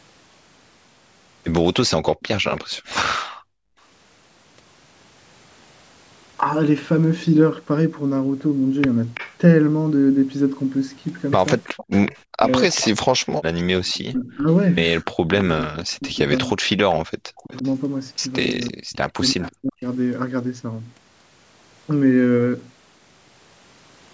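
From 2.05 to 2.94 s there's a faint repeat of the speech trailing it by 331 ms, sitting about 20 dB down. That's an echo leak, most likely a far-end speakerphone whose echo canceller let some of its own mic pickup slip back. It returns briefly at 9.14 to 9.36 s, then runs from 11.64 to 15.44 s at about 15 dB down, and again from 17.37 to 19.5 s at about 20 dB down.

Between 3.24 and 3.78 s the room sound sinks by as much as 32 dB for about half a second, then comes back. That's background gated by the echo canceller: while the loudspeaker was playing, it clamped the mic down hard. There's a shorter dip at 17.07 to 17.12 s, roughly 40 dB deep.

From 11.88 to 12.46 s, and again from 14.11 to 19.84 s, the talker's speech drops out in pieces by around 40 dB. That adds up to about 150 ms in the first stretch and about 3 s in the second. It's speech suppressed in double talk, likely because both sides were talking at once and the canceller couldn't separate the talker from the echo, so it turned both down.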